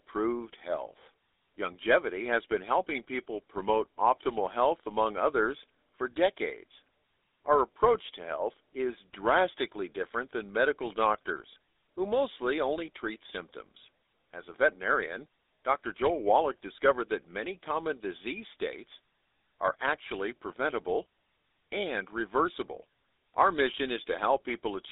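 From start to finish the speech has passed through the GSM full-rate codec. It models the vocal tract and excites it with evenly spaced pulses, a coarse scheme that fits a 13 kbit/s stream. The audio is confined to a telephone band of roughly 300 Hz to 3.7 kHz, with nothing above 3.8 kHz. The damage is plainly audible: the voice sounds buzzy and gravelly, thin and muffled at the top.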